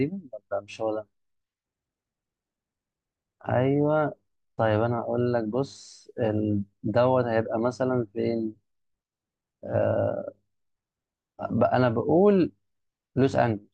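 No technical faults can be heard anywhere in this speech recording. The audio runs on continuously, with no event at any point that marks a problem.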